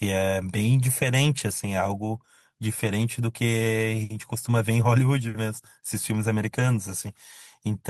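At 1.47 s, 2.79 to 2.89 s and 6.59 to 6.61 s, lost packets were rebuilt from error correction. There is no gap. Each patch sounds briefly rough and noisy.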